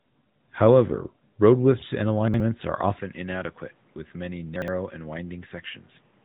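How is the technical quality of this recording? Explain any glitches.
The recording is of poor technical quality: the whole clip is band-limited and coded, and it has two jumbled moments and a sudden change in tone partway through.

AMR narrowband mobile codec: Throughout, the speech has the buzzy, synthetic quality of AMR-NB at a mid-rate mode, roughly 10 kbps. The codec models the vocal tract at 8 kHz sampling, so nothing passes above 3.8 kHz. A spectrogram shows a flat, hard ceiling there.

Chunks out of order: From 2.28 to 2.4 s, and again from 4.56 to 4.68 s, a 60 ms chunk plays one chunk late and swaps places with its neighbour. Each swap sounds like a garbled stutter. The waveform shows abrupt discontinuities at the joins, and the spectrogram shows thin vertical lines.

Input switched to a poorer device: At 2.99 s the sound turns duller and boxier, with no gap. The level drops about 5 dB, and a new noise floor appears about 35 dB below the speech. 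This is likely a change of input to a lesser microphone. The waveform envelope steps down, and the spectrogram shows faint broadband noise between syllables.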